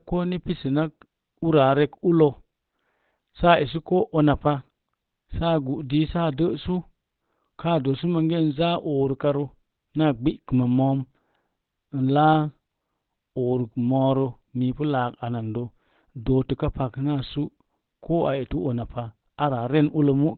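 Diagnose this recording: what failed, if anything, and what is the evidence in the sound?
Opus compression runs throughout, at the codec stage: the speech is muffled and hoarse, with nothing above 4.3 kHz. That narrowband sound likely comes from the encoder dropping into its SILK speech mode at a very low bitrate, around 12 kbps, and damaging the audio heavily.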